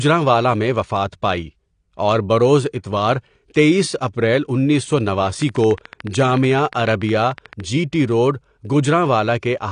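Throughout the speech the sound is dull and smeared, with plainly audible codec damage and nothing above 9.8 kHz. That lowered cut-off and smearing point to AAC compression, likely AAC-LC at a low bitrate around 32 kbps, where quantising against a hearing model discards detail.

From 5.42 to 7.61 s a train of clicks ticks over the sound at a regular 13.7 per second, around thirty in all, peaking about 5 dB above the speech. Such evenly shaped pulses likely come from interference from nearby equipment or a faulty connection or power supply.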